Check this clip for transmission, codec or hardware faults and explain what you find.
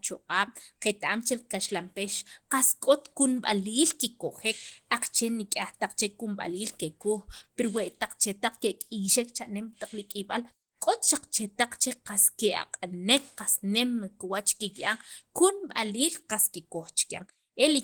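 One codec fault runs through the whole speech clip: Opus compression, heard from start to finish. The damage is plainly audible. The speech sounds hoarse and grainy, with a rough, noisy texture. The top end still reaches about 20.1 kHz. The cause is likely a low-rate Opus encode in its hybrid mode, which fits roughly 16 kbps. At that rate some bands are filled with noise instead of true detail, so the sound turns rough.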